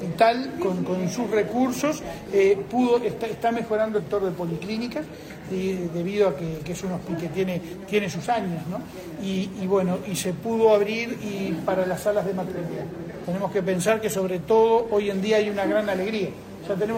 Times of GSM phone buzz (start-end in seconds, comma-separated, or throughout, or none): none